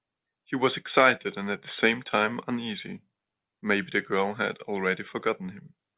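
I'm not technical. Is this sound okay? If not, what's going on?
Yes, nothing in this speech recording points to a technical fault.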